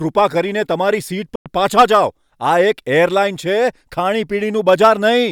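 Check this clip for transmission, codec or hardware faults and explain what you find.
One fault stands out: a Bluetooth dropout from 1.35 to 1.46 s. For about 100 ms the speech falls to silence, then resumes further along, as if it had kept playing through the gap rather than pausing. The likely cause is audio packets failing to reach the headphones in time over the wireless link and being discarded, leaving the output with nothing to play until good packets arrived. A gap of this length fits a short run of consecutive lost packets.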